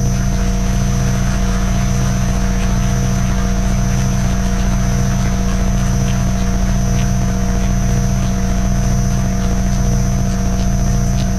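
No technical faults are audible anywhere in this audio.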